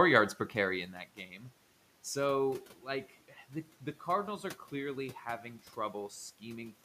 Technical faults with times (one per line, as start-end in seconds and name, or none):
0.94-1.43 speech cut by the noise suppressor